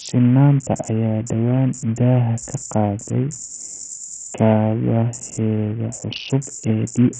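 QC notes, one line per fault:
Throughout, Bluetooth SBC compression: the speech has a coarse, gritty edge and sounds brittle. Nothing is heard above about 9.4 kHz, so the top of the spectrum is simply gone. Quantisation noise rides on the remaining bands, and aliasing clings to the sound. The cause is likely a heavily starved SBC link, which fits a bitrate near 48 kbps. The upper sub-bands get no bits at all, and the rest are crudely quantised.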